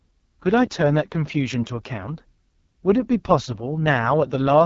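From start to finish, the speech passes through the AMR wideband (HD Voice) codec at what sounds like its lowest mode, around 6.6 kbit/s, too few bits for the vocal tract model. Voices turn rough and raspy, with heavy coding damage and nothing above 7.3 kHz.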